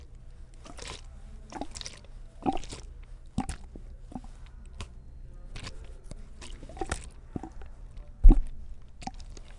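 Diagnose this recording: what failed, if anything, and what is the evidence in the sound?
Nothing failed here, as far as I can hear: the sounds come through steady and intact, with no sign of trouble anywhere in the chain.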